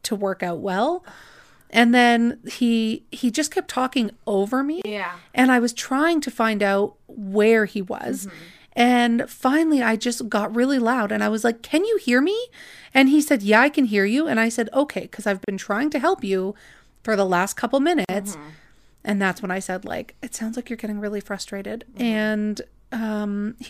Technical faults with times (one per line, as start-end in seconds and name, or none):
4.82-4.85 gap at a join of encoded pieces
15.44-15.48 gap at a join of encoded pieces
18.05-18.09 gap at a join of encoded pieces